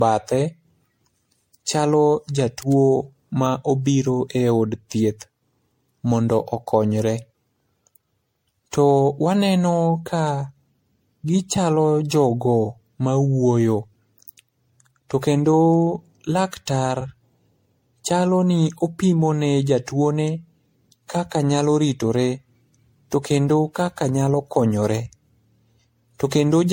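Speech, affected from start to finish by generation loss: the audio was likely decoded and re-encoded through MP3 around seven times, each pass re-quantising on a shifted frame grid so that noise and spectral gaps accumulate. The voice sounds swirly, smeared and hollow, worse than a single encode at a rate that fits 64 kbit/s would explain, with consonant attacks blurred and nothing above 16.5 kHz.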